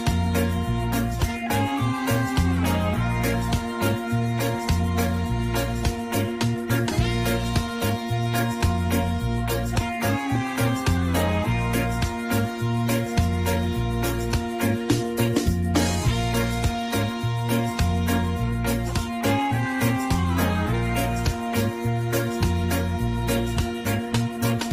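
At 6.91 to 6.93 s a skip ahead occurs: roughly 0.7 s of audio was dropped and playback jumps forward, with both sides joined almost without a gap. From 7.67 to 8.55 s and again from 9.79 to 10.40 s, jitter buffer speed-up trims short pitch-period pieces to reduce excess buffered delay. The sound runs about 8% and 7% fast at unchanged pitch and feels hurried.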